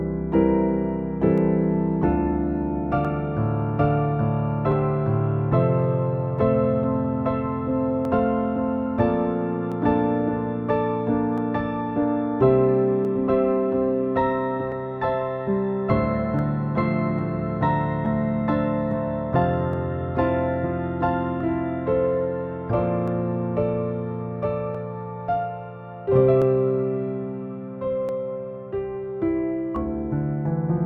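From 1.38 s to 29.76 s, a short click recurs every 1.67 s, about twenty in all, heard while there is signal. The pattern points to clock drift buffer slips. Two devices are likely running on separate clocks that differ by something like 200 parts per million, so the buffer between them creeps toward full or empty and then drops or repeats a small block, around fifteen samples, producing the regular tick.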